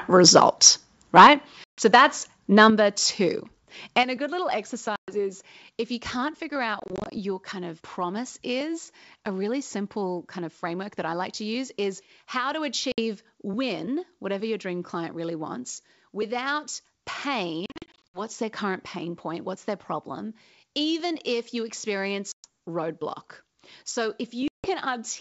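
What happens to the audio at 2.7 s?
At 2.7 s the level of the audio drops suddenly by about 7 dB, in one step. Voice and background fall together. This is a microphone volume stepped down. The likely cause is the call software judging the input too loud and cutting the device's input volume at once. It comes right after a distorted peak, so the reaction fits that overload.

That peak falls at 2.60 to 2.62 s and sounds like microphone overload. The input likely ran about 2 dB past what the converter could take. The tops of the loudest waveform peaks were flattened on a small share of samples, which adds a brief crackling edge to that moment.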